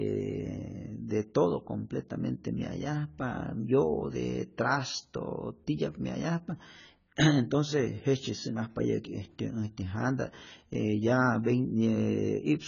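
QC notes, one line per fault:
Throughout: AAC compression. Nothing sits above 7 kHz, and the speech is dull and smeared, with warbling, fizzy sibilants and held vowels. This is likely heavily compressed AAC-LC, consistent with about 16 kbps, where the encoder lowers its cut-off and starves bands of bits.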